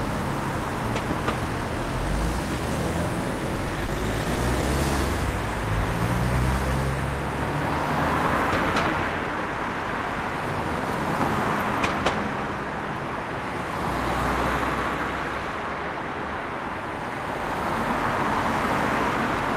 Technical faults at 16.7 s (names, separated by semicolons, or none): none